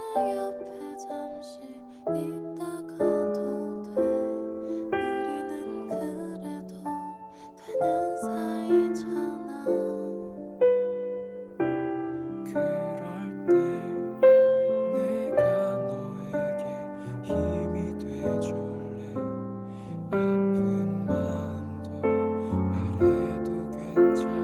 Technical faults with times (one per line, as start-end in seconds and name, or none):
none